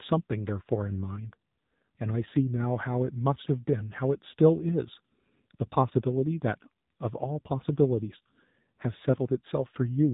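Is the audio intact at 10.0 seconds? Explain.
No, at 10.0 s the speech sounds buzzy, synthetic and muffled, with nothing above 4 kHz. This AMR narrowband mobile codec damage runs throughout, and its heaviness suggests roughly 7.4 kbps.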